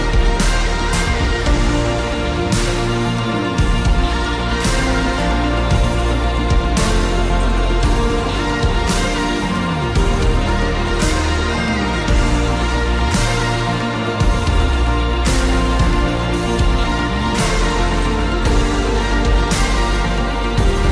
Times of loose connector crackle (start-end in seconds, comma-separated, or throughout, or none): none